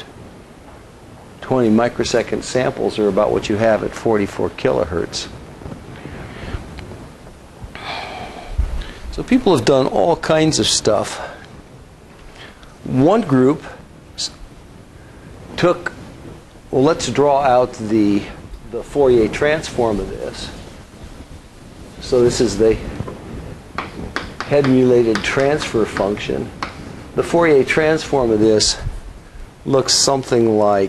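No technical faults occur anywhere in the audio.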